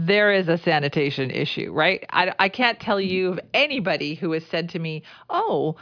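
No technical faults are audible.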